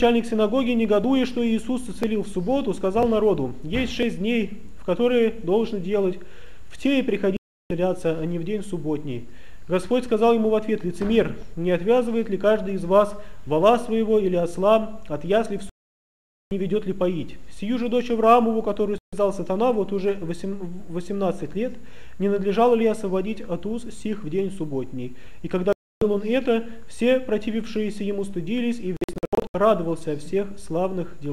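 From 1.04 s to 4.03 s there are periodic USB or driver dropouts. A background task stalls the USB bus or the audio driver about once a second, every 1.0 s. Each time, roughly a millisecond of audio is skipped and not replaced. That happens about four times. The joins are heard as regular ticks, spaced a second apart.

The digital broadcast dropouts come next. The receiver lost the signal, or frames failed their checks, and it muted until good frames returned. The sound cuts or fades to silence at 7.37 s for 336 ms. It goes again at 15.69 s for 816 ms, the longest gap. Shorter gaps follow at 18.98 s for 144 ms and at 25.73 s for 288 ms. From 28.97 s to 29.55 s the loss is broken into several short holes, 360 ms in total, the longest 72 ms. Each gap is a whole multiple of 24 ms, which fits a frame of that length. The sound that was sent during each gap is lost.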